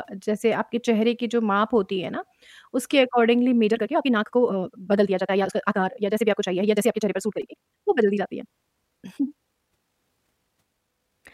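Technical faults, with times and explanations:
3.60 s to the end at 11.34 s, time-stretched section: from 3.60 s the speech suddenly runs about 1.86 times faster and sounds rushed, yet its pitch does not rise. That steady pitch is what separates this from a plain speed-up or sample-rate mismatch, which would lift the voice toward a chipmunk tone. The cause is likely software compressing this part to fit a shorter length by dropping short slices of audio.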